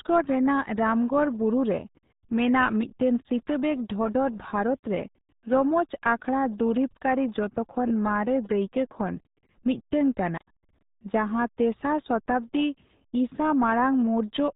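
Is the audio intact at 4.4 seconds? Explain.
No. At 4.4 seconds, as throughout the whole clip, the speech is muffled and gargly, with a smeared, bubbling texture and nothing audible above about 3.8 kHz, so the consonants lose their crispness. This is heavy damage from the RealAudio 14.4 codec, an early dial-up speech coder that keeps only a narrow low band and codes it crudely. The degree of damage fits a very low bitrate of around 8 kbit/s.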